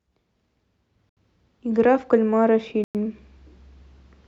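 At 1.09 s and 2.84 s the speech drops to silence for 75 ms and then 108 ms before resuming: a Bluetooth stall, likely interference delaying packets until the headphone buffer emptied.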